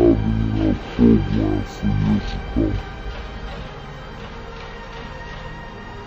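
Throughout, stereo read as mono: interleaved left-right samples run as one channel, giving half speed, an octave drop, and a faint mirrored image in the spectrogram's upper half.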